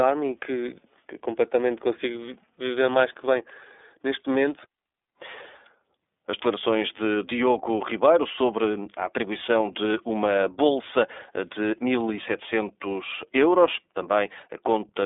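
Throughout, the speech sounds boxy, slightly rough and synthetic, with nothing above 3.8 kHz. This is plainly audible iLBC codec damage, which fits its 30 ms, 13.33 kbps mode.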